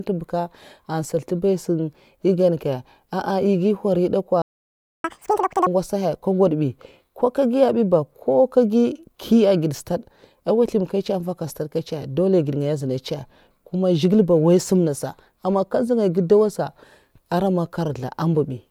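At 4.42 s the speech cuts out and stays silent for about 0.62 s, until 5.04 s, a playback stall that most likely comes from the player running out of data or having its output thread blocked. The sound then resumes where it stopped rather than skipping ahead.

From 5.04 s to 5.67 s comes catch-up at higher speed: the player resamples its backlog at 2.0 times normal rate to recover the lost time, so the speech runs double-fast and jumps up by roughly ten semitones before dropping back to normal pitch and pace.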